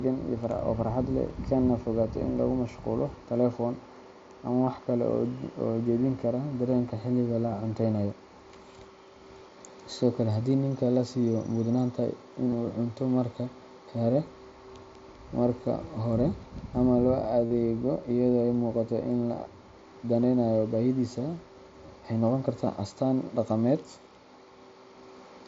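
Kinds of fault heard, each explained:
Concealed Bluetooth headset packet loss: voice packets from the headset went missing, and the receiver filled each gap by repeating the best-matching stretch of recent waveform. The short losses at 4.66, 12.51 and 21.87 s, about 15 ms each, are nearly hidden. The 52.5 ms run from 17.46 to 17.51 s becomes a brief buzzy held tone with a slight warble as real sound returns. Unlike a plain dropout, the level never falls to silence.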